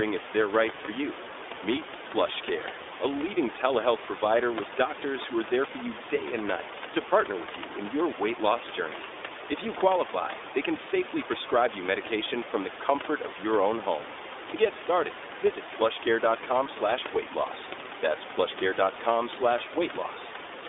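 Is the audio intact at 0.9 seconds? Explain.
No. A lost iLBC frame spans 0.86 to 0.90 s, so the sound at 0.9 s is the very end of a 20 ms gap. The packet never arrived. The decoder filled the hole by repeating the last pitch cycle mixed with some noise. That gives a brief held, slightly buzzy tone instead of the real signal. Because each iLBC frame decodes on its own, normal audio returns almost at once.

The iLBC codec also colours this moment, as it does the whole clip. The line passes only about 300 Hz to 3.6 kHz, so the speech sounds thin and lacks its upper range. The codec damage is plainly audible: a rough, slightly synthetic edge. The 20 ms frame length and overall quality point to the 15.2 kbps mode. The room noise, about 15 dB below the speech, comes through the same narrow band.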